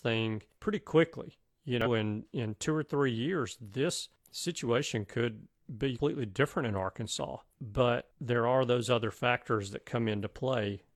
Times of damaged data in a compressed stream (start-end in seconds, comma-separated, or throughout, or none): 1.81-1.87, 5.95-6.00